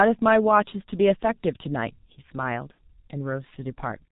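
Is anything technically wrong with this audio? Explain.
Yes, there are two faults in this speech clip.

The whole clip carries heavy G.723.1 codec damage. Nothing comes through above about 4 kHz, so the voice is muffled, and the slow 30 ms frame updates leave it hoarse with smeared consonants. The effect points to a roughly 6.3 kbit/s G.723.1 stream. A plain low-pass filter would dull the top end without adding that rough, blurred texture, so the texture is what identifies a low-rate frame-based speech codec.

From 2.72 to 2.79 s there is VoIP packet loss concealed by the speech codec. The gap is about 60 ms, which fits two lost 30 ms frames. Instead of going silent, the decoder kept replaying its last pitch and filter at falling gain, so the sound stretches and fades. A plain dropout would leave a hole or a click. Here the gap is filled with synthetic sound, and the voice stays weak for a moment after normal packets return.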